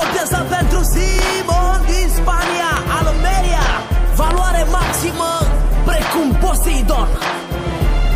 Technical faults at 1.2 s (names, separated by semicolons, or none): loud pop